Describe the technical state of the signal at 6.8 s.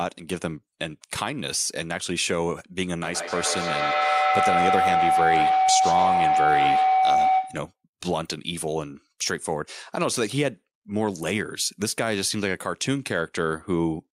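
At 6.8 s the signal carries feedback howl, which runs from 3.02 s to 7.81 s. A microphone is picking up a loudspeaker carrying the same call, and each trip around that loop adds gain, so the repeats swell rather than decay and collapse onto one favoured frequency. Here that is a tone near 700 Hz, with repeats roughly every 150 ms, peaking about 4 dB above the speech.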